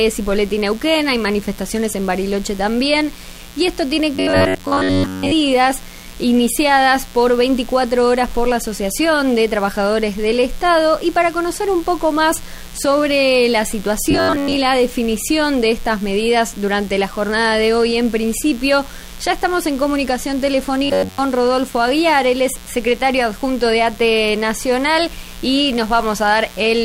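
A mains buzz runs through the whole clip, about 25 dB below the sound. Sharp switching spikes locked to the 60 Hz supply spread harmonics up into the kilohertz range, giving a raspy edge rather than the smooth, low tone of a plain hum.

From 4.15 to 5.32 s, 14.11 to 14.57 s, and 20.84 to 21.18 s, the sound turns into a rigid, metallic robotic buzz, most likely from repeated short buffers. In the first two stretches most of the audio is replaced by repeats of a fragment roughly 10.7 ms long, and in the last stretch all of it is. This imposes a fixed 93.8 Hz pitch. Unlike the mains buzz, that pitch is not a multiple of 60 Hz, comes only in bursts, and still loosely follows the shape of the underlying sound.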